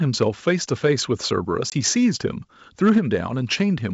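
From 0.21 to 0.5 s the loudest syllables take on a harsh, crackly edge, the sound of microphone overload, likely from the input volume being set too high so that peaks ran past the converter's limit by about 4 dB. A shorter burst follows at 0.85 to 0.87 s, only about 1 dB over. On a waveform the peaks are flattened. A small share of samples is cut in the first stretch and a larger share in the brief second one. On a spectrogram the clipped moments show as faint vertical smears of added high-frequency energy.

At 1.70 to 1.74 s there is a packet loss on an ADPCM call. A hard-edged gap of about 20 ms, consistent with roughly two lost packets, replaces the audio with silence. When the sound resumes, the decoder's predictor and step size no longer match the sender's, so it comes back slightly distorted, settling within tens of milliseconds. The waveform shows an abrupt flat hole. The spectrogram shows a blank vertical strip.

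The overload returns from 2.84 to 2.98 s at about 3 dB over. Here a much larger portion of samples is squared off, so the crackle is at its densest.

Right at 2.98 s the whole signal, voice and background alike, drops by about 2 dB. This is a microphone volume step-down, probably the call software reacting to the clipping by lowering the input gain in a single move. On the waveform the envelope shrinks abruptly. On the spectrogram every band dims at once, while the G.722 wideband coding keeps its clean extension toward 7 kHz on either side of the step.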